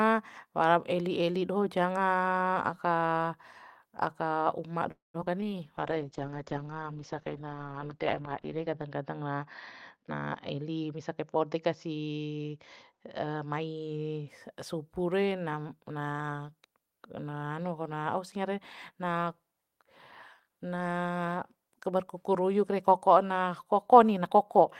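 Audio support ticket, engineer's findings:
Call audio freeze, 4.91 to 5.16 s: sound stretches into a fading buzz, then about 160 ms of silence. Likely delayed packets draining the jitter buffer; nothing lost, everything after runs about 0.23 s late.

Short concealed packet loss at 5.20 s, 5.25 s and 5.41 to 5.58 s: quick smears or wobbles. Roughly 20 ms went missing each time, and the receiver covered it by extending the previous sound.

Call bitrate drop, 5.79 to 14.34 s: audio goes muffled and rough. Opus drops from 32 to 9 kbps, bottoming out for about 3 s, with bandwidth narrowing from 20 kHz to 6 kHz.

Jitter buffer speed-up, 10.08 to 11.56 s: speech sounds rushed at the same pitch, about 115% speed. Small pitch-period chunks, around 0.2 s in total, get trimmed to shrink the backlog.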